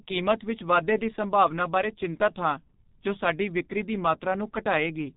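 From start to finish the speech has gone through the G.723.1 codec, an old low-rate telephony coder. Its heavy damage fits a bitrate near 6 kbit/s. The coder keeps nothing above 3.8 kHz and rebuilds the voice from a coarse model refreshed only frame by frame, so fine detail between updates is lost. The result is muffled, hoarse speech with smeared, indistinct consonants throughout.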